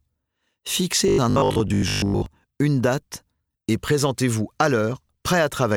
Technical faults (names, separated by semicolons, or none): robotic sound from repeated short buffers